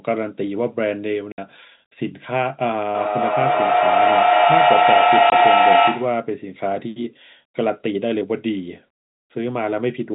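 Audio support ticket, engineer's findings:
Hard-edged silent holes at 1.32–1.38 s (60 ms, fits three 20 ms packets) and 5.30–5.32 s (20 ms): packet loss filled with silence, lost packets replaced by silence.

Feedback howl from 2.95 to 6.32 s, a tone near 700 Hz with the loop repeating about every fifth of a second, peaking about 9 dB over speech. Acoustic loop between two devices on the call; the 4 kHz telephone band of the G.711 path is audible underneath.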